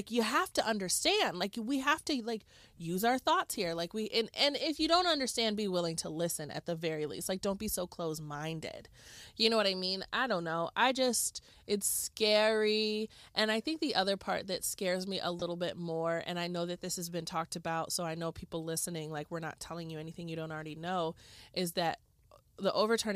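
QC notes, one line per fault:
15.39–15.42 s: lost LE Audio frames. A 22.5 ms dropout in the speech, which fits three lost 7.5 ms frames of a likely LC3 stream. The decoder refills the gap by reusing the last spectrum with random signs, so the sound briefly smears into noise.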